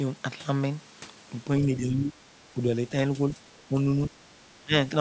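From 1.61 to 2.32 s the speech dips by roughly 10 dB, then shorter dips of about 5 dB follow at 2.51–2.61, 3.35–3.50 and 3.69–3.75 s, and a deep one near 20 dB at 4.61–4.72 s. This pattern is likely speech suppressed in double talk, where the echo canceller turned the talker down along with the far end. On a waveform the envelope pinches inward at each spot. On a spectrogram, already empty above 8 kHz from the call processing, those slices fade.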